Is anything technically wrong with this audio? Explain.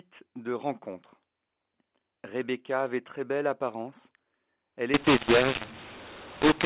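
Yes. From 4.94 s to the end, the sound has the signature of mu-law and A-law mixed up: A-law telephone samples decoded as mu-law. That scrambles levels into harsh distortion, and unlike simple clipping, the pauses fill with noise.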